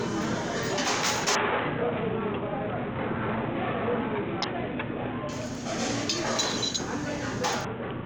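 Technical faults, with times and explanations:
1.35 to 5.29 s and 7.65 s to the end, Bluetooth SBC bit pool drop: the congested link cut the encoder's bit allowance, starving the upper sub-bands. Treble goes dull and gritty noise rises, which fits a rate of about 54 kbps.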